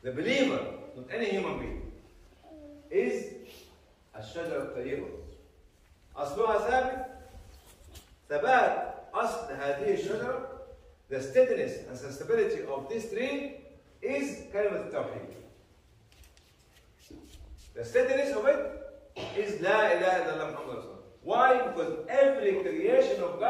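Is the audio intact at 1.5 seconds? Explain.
Yes, at 1.5 seconds the audio plays through cleanly, with no dropout, click, distortion or other fault at that moment.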